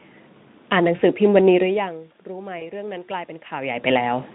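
At 0.95 to 1.01 s, VoIP packet loss concealed by the speech codec. About 40 ms went missing. The decoder extrapolated, leaving a brief buzzy or noisy smear that fades.

From 1.61 s, automatic gain rising. The input dropped about 17 dB as the talker moved. The gain climbed about 5 dB until 4.3 s, swelling voice and room noise together.

At 2.59 to 2.70 s, packet loss concealment again. This time 20 ms was lost. The sound turns briefly smeared and weak, then recovers.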